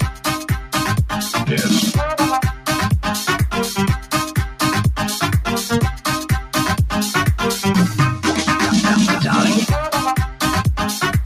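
The sound pumps and thins throughout, with its level swinging by around 5 dB as held and fading material is pulled down while onsets come through. This points to a noise suppressor applied to music or sounds, a speech-oriented suppressor left engaged that mistakes steady content and tails for noise. Two brief stretches, 0.1 to 0.26 s and 2.53 to 2.68 s, each roughly 150 ms long, dip by about 9 dB. This is sound cut by the noise suppressor, which judged those moments noise-like and attenuated them harder than the surrounding material.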